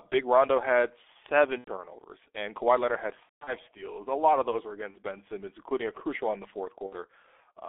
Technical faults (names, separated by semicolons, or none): G.723.1 codec; VoIP packet loss concealed by the speech codec